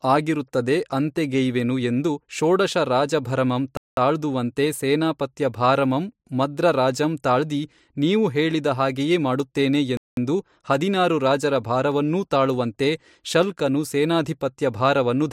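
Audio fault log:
3.77–3.97 s and 9.97–10.17 s, gap between chunks: the speech stops dead for 200 ms after "ಅಂತೆಗೆಯ್ವೆನು ಎಂದು ಷೋಡಶ ರಾಜಭರಮಂ" and after "ಹಾಗೆಯೇ ಮಾಡುತ್ತೇನೆ". The holes fall 6.2 s apart. This fits 6-second chunks joined with silence between them. Nothing is lost, but each join breaks the flow.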